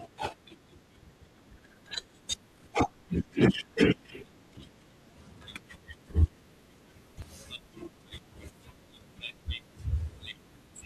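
At 2.29, 3.54, 4.57 and 7.22 s the speech jumps forward, with no gap of silence. Each is most likely a dropped buffer (overrun): samples were not read out before the capture hardware overwrote them, so a short stretch is missing and the audio on either side is spliced together. The losses at 2.29 and 7.22 s are around 30 ms. Those at 3.54 and 4.57 s are around 10 ms.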